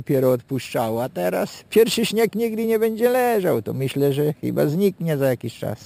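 From start to finish a bright, metallic fizz follows the sound's level, about 20 dB below it, lowest between 6 kHz and 12 kHz. This is imaging from sample-and-hold upsampling: samples were repeated without smoothing, and the mirroring around 6 kHz fits a 12 kHz original rate.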